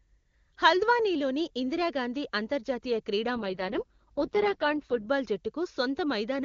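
An AMR rate drop runs from 3.36 s to 5.08 s, starting just after "ఇందిరా గాంధీ అంతర్జాతీయ క్రీడా". The AMR wideband codec falls from 23.85 kbit/s to its lowest mode, 6.6 kbit/s, moving bits from speech detail to error protection. The speech turns rough, raspy and synthetic, with no gap and no loss of bandwidth, then regains clarity when the full rate returns.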